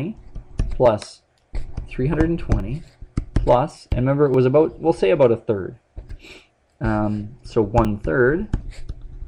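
The audio has a regular tick running through it, from about 0.86 s to 7.85 s, recurring every 1.75 s, so you hear about five of them. That steady spacing is the giveaway for clock drift buffer slips. Two devices are likely running on their own clocks, off by something like 700 ppm, so the buffer between them creeps full or empty until a block is dropped or repeated. Each click fits a jump of roughly 70 samples.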